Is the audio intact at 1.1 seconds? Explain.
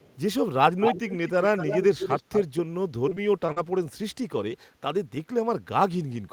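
No. From 0.79 to 2.43 s, an echo leak likely slips past a far-end echo canceller, so a delayed copy of the speech returns about 230 ms late, about 5 dB quieter than the original.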